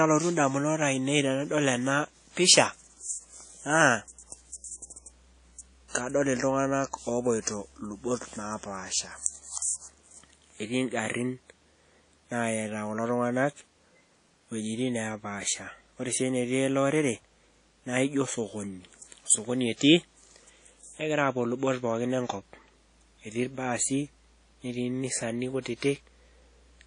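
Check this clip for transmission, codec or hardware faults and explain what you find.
One codec fault runs through the whole speech recording, with plainly audible damage. The sound is ringing and washy, carrying a hiss that swells and fades with the speech, and nothing is present above 10.1 kHz. This is likely WMA compression: a transform codec whose long blocks smear quantisation noise across tens of milliseconds around each sound, while weak spectral lines are zeroed out. The degree of damage fits a low bitrate of around 32 kbps.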